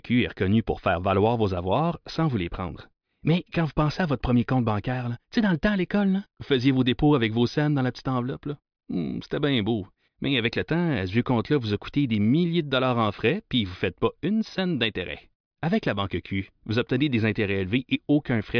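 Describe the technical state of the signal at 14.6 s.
At 14.6 s the speech signal is intact, with no dropout, click, distortion or other audible fault at that point.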